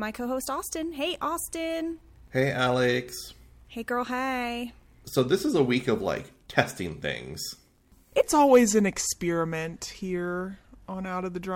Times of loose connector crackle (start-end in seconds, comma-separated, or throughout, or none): none